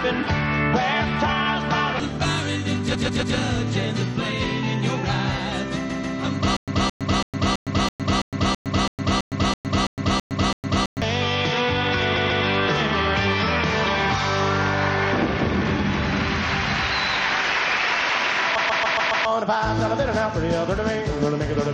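At 2.94 to 3.36 s, a block of about 139 ms plays three extra times back to back, so the sound stutters and the audio runs 0.42 s longer. The same fault, repeated frames, returns at 5.89 to 6.17 s and 12.16 to 12.44 s, with two extra plays each adding 0.28 s, and at 18.57 to 19.26 s, with five extra plays adding 0.70 s. The block length fits a run of six compressed frames that was written or sent again, so the decoder replays them. No silence separates the repeats, and nothing is lost.

From 6.57 to 11.02 s a different pattern takes over, the stutter with silent gaps. A 219 ms fragment plays, then 111 ms of digital silence follows. This cycle recurs every 330 ms, thirteen times in a row. The cause is likely a stalled player or stream that replays its last fragment at each retry and then runs dry. The steady rhythm with silence between bursts sets it apart from the repeated frames. The audio that should have played during the stall is missing instead of delayed.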